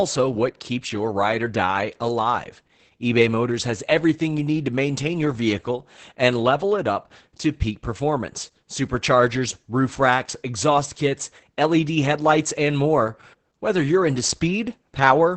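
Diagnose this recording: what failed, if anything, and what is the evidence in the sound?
Throughout the clip the speech sounds muffled, hoarse and faintly robotic, with nothing above about 8 kHz. This is Opus voice compression at the codec stage: the SILK coder, squeezed to a rate that fits roughly 10 kbps, codes the excitation coarsely and cuts the band at wideband.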